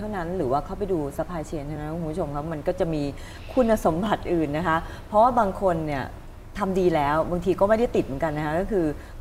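Two devices in the chain were likely running on separate clocks that disagree by something around 500 parts per million, so the buffer between them drifts until a small block of samples, on the order of 50, is dropped or repeated. These clock drift buffer slips recur every 2.3 s from 1.76 s to 8.67 s, about four in all, each heard as a brief click or pop at the join.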